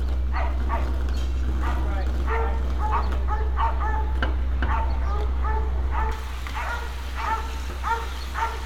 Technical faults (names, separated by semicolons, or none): pre-emphasis left on